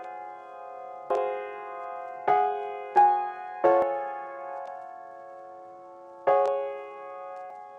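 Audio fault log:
1.10 s, 3.82 s, 7.50 s: damaged data in a compressed stream. Each event is a very short blip in the music, only a few milliseconds long, where a stretch of the compressed bitstream carries bad bytes. The decoder cannot make sense of the frame at that point, loses sync and hunts for the next valid frame header. The garbage it briefly outputs, or the gap it leaves, is heard as a chirp, click or short hole.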